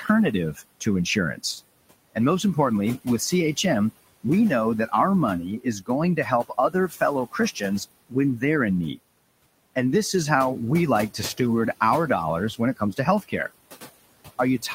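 Right from the start there are noise suppressor artifacts: the room noise, sitting about 17 dB under the speech, gets pulled down roughly 20 dB between phrases. Then comes speech cut by the noise suppressor at 0.54–0.87 s, 5.59–7.62 s, 8.09–8.43 s and 12.58–13.51 s, where the suppressor mistakes soft bits of speech for noise and ducks them as much as about 19 dB, so a fraction of a second each time sounds swallowed.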